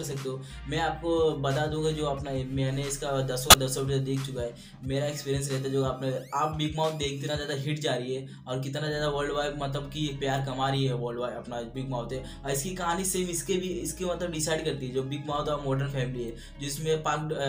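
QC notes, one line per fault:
3.50 to 3.54 s, corrupt frame decoded: a brief chirp, squeak, blip or burst of noise, roughly one frame long, where flipped bits inside a single compressed frame were decoded rather than concealed, so misread gains and codes scatter energy into the wrong frequencies. The error peaks at around -10 dBFS. On a spectrogram it shows as a narrow vertical smear of misplaced energy about 36 ms wide.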